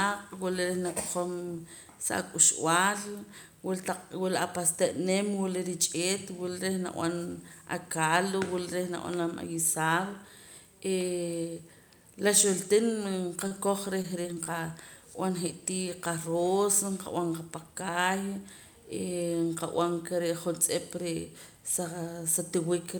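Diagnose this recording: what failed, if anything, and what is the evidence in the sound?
A short stall from a late packet occurs at the network stage, at 13.47 to 13.53 s. The speech holds one sound about 36 ms too long, then resumes where it left off. Nothing is lost. The jitter buffer ran dry, and playback now runs 36 ms later.

Repeated packet loss causes robotic sound from 14.02 to 14.48 s, also at the network stage. Four holes sound choppy, the longest 23 ms. About 80 ms was patched by repeating prior sound and about 80 ms is missing, so roughly a sixth of the stretch is concealed.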